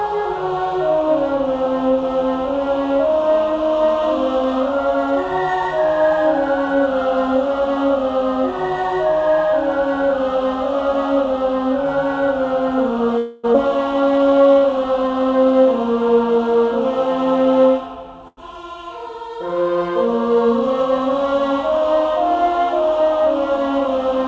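The audio comes through a call link whose band stops at 8 kHz, which points to a wideband call codec such as G.722. From 13.18 to 13.46 s there is a call audio freeze. The last sound is carried on as a fading buzz or hiss for 256 ms. Nothing is lost, and playback then resumes where it stopped. The likely cause is packets held up in transit, letting the jitter buffer run dry. Right after, at 13.54 to 13.56 s, comes a skip ahead. Roughly a fifth of a second of audio is missing. The two sides are butted together with almost no gap, as if the buffer discarded a stretch to catch up. From 13.69 to 15.11 s a jitter buffer slow-down follows. Playback runs at 89 percent speed with unchanged pitch. Sounds are drawn out, as repeated pitch periods add 165 ms to rebuild the buffer's reserve. Then, from 15.24 to 17.67 s, a jitter buffer speed-up pushes the pace to 109 percent. Small slices of pitch periods are cut out, removing about 200 ms in total. 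The audio sounds hurried but keeps its pitch. At 18.28 to 18.39 s there is a short stall from a late packet. One sound is held for 93 ms with a slight buzz or dip, then continues from the same place, with nothing lost.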